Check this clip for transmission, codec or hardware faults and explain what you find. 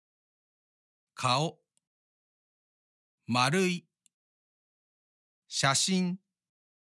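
No faults detected here.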